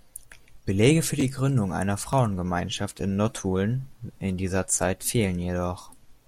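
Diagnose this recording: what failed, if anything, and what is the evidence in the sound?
Nothing failed; no faults heard.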